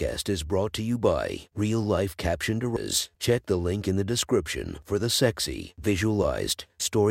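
At 2.77 s, damaged data in a compressed stream makes the decoder lose frame sync, leaving a brief chirp, click or short hole.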